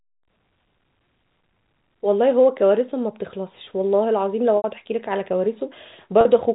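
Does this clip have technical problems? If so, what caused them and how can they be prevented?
Yes. Packets were lost twice, at 4.57 to 4.64 s (70 ms) and 6.21 to 6.25 s (40 ms). Each time, the receiver filled the gap by repeating the last pitch period and fading it: the shorter gap sounds like a briefly held, buzzy tone, while the longer one fades toward silence before the sound cross-fades back. This is packet loss with pitch repetition over the G.711 telephone link. Preventing it means reducing network loss, for example with prioritised voice traffic, a larger jitter buffer or forward error correction.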